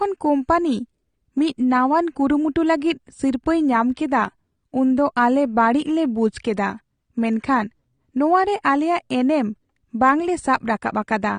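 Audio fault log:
throughout, AAC compression: the speech is dull and smeared, with fizzy, warbling sibilants, likely from AAC-LC coding at a rate that fits about 32 kbps. Unlike a plain low-pass filter, the treble is patchy and swirls with noise instead of rolling off cleanly.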